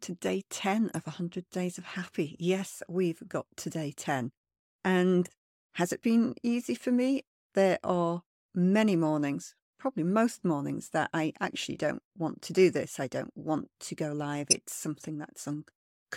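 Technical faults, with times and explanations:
0.90–0.96 s, corrupt frame decoded: damaged bits in a few consecutive compressed frames were decoded as if valid, so misread gains and codes placed energy at the wrong frequencies for those frames, heard as a short, fairly quiet glitch.
14.50–14.53 s, corrupt frame decoded: just after "want to go live", a couple of frames with flipped bits were played anyway, and the wrongly placed energy comes out as a sharp, loud glitch.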